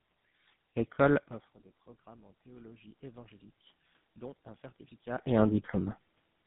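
From start to finish the speech carries tandem speech coding. It passed through GSM full rate at 13 kbit/s, then G.711 mu-law at 64 kbit/s, then GSM full rate again. The second GSM coder works on what the first already damaged, so the speech sounds rougher, duller and more warbly than one pass would leave it, with nothing above 3.8 kHz. The compounded roughness is what separates this from a single GSM link.

From 2.03 to 3.41 s, automatic gain rising sets in. The input had fallen by about 24 dB, and the gain control responds by climbing about 6 dB over those 1.4 s. A second rise of about 4 dB follows from 4.22 to 6.02 s. In both, the room noise swells along with the speech. That shared, gradual swell is the sign of gain control. A talker moving near 1 s and 5 s changes only the voice level, while the background stays steady.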